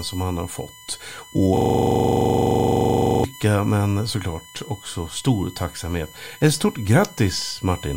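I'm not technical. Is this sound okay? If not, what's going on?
No. A USB whine runs through the whole clip: a steady 1 kHz tone, loudest around 3 kHz, caused by the USB connection's power pulses leaking into the audio.

A system hang loop runs from 1.57 to 3.24 s, after "som han har fått". The computer froze, and the sound hardware replayed the same 43 ms slice 39 times, making a rapid buzzing stutter until "men såklart också stor".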